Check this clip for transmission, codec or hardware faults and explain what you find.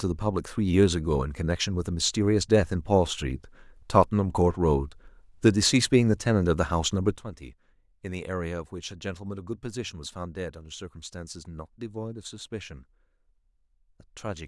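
One fault is present. Sudden gain jump at 7.17 s, lasting to the end: the speech and its background noise drop together by about 12 dB in a single step, with no fade. The likely cause is a digital gain setting or bit shift applied instantly rather than ramped.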